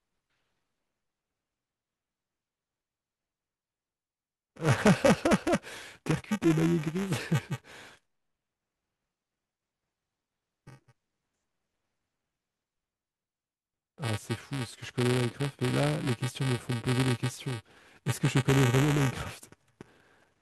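Buffer tearing runs through the whole speech clip: a rough, robotic buzz at 345 Hz, heard only while sound is present. The writer and reader have slipped, so a small slice of each buffer carries audio about 5 ms old, with hard joins. The rate fits a 128-sample buffer.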